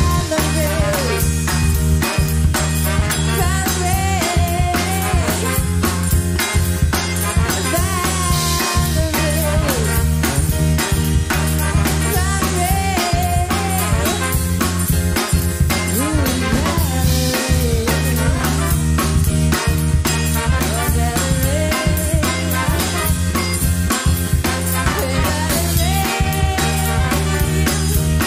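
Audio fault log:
No faults detected in this clip.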